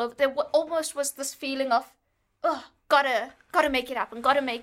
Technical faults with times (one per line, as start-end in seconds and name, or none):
none